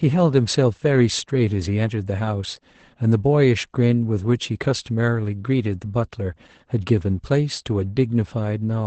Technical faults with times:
0.00-8.86 Opus voice compression

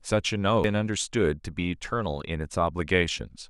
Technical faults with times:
0.64 CD skip

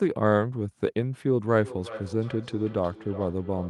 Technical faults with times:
1.45-3.70 feedback echo between two devices

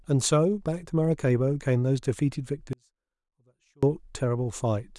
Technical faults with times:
2.73-3.83 audio dropout to a faint residue

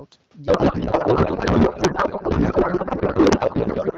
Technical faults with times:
0.47-3.98 codec payload misread

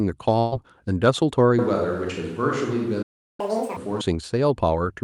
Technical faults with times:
0.39-0.55 burst of packet loss
1.59-4.01 switch to a distant microphone
3.02-3.40 playback stall
3.40-3.77 catch-up at higher speed

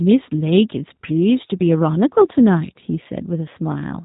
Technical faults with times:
0.00-4.04 G.729 codec

